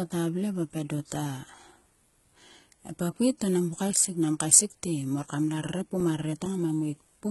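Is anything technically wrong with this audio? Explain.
Yes, two faults can be heard.

HE-AAC compression runs through the whole speech clip and is likely the cause of its heavy codec damage. The codec transmits only the lower spectrum and rebuilds the treble by copying lower bands upward and shaping them with a coarse envelope. The result fits a very low bitrate, around 16 kbps. Sibilants come out gritty, metallic or lispy. Unlike plain low-bitrate AAC, which simply dulls the top end, the treble here is present but synthetic, with harmonics that don't line up above the crossover.

CD scratch ticks occur from about 6.00 to 6.68 s, right after "mor kam la". Four ticks of uneven strength fall at a steady rate of roughly four to five a second, the longest lasting about 7 ms. A blemish on the disc destroys more data than error correction can rebuild on each rotation, so the player interpolates or mutes those samples. 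The regular spacing, tied to disc rotation, separates them from random digital clicks.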